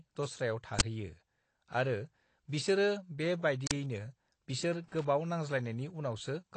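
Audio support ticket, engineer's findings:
Speech band is dull and smeared throughout, with warbling texture and nothing above 8.7 kHz. Likely AAC compression, AAC-LC at low rate; the damage fits roughly 32 kbps. The encoder quantises coarsely and drops the top band.

Two short, loud bursts of digital noise, at 0.79–0.81 s and 3.67–3.71 s. Uninitialised buffer. Playback read memory before audio was written. Lengths of 21 ms and 43 ms fit 1024-sample and 2048-sample blocks.

Irregular crackle and scratching from 4.88 to 5.05 s. Loose connector crackle. A worn or dirty contact makes and breaks rapidly, chopping the signal into bursts. Check cable and jack on the capture path.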